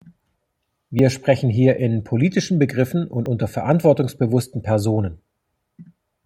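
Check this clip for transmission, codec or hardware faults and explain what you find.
The speech has three abrupt skips, at 0.99 s, 3.26 s and 4.42 s. Each is a jump in the sound, and about 30 ms of audio is missing each time. There is no gap of silence. The two sides simply butt together. This is likely a dropped buffer (overrun). The program failed to read its samples in time, the hardware overwrote them, and that stretch was lost.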